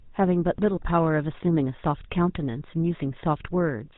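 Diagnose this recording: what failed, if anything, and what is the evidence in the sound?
The codec stage is the culprit. All the way through, the speech carries the buzzy, gravelly grain of the GSM full-rate codec and nothing above 4 kHz. A vocal-tract model driven by sparse regular pulses does that. The plainly audible damage fits a 13 kbps coder.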